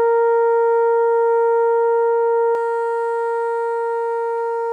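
Pre-emphasis left on from 2.55 s to the end of the music. The treble was lifted ahead of recording or transmission, as an emphasis network does to protect high frequencies from noise, but the complementary de-emphasis cut never followed. The top end stays boosted, rising to about 11 dB above the 1 kHz level by 10 kHz, a slope consistent with a J.17-type curve. The music turns thin, glassy and overly bright, with sharp, hissy edges on transients.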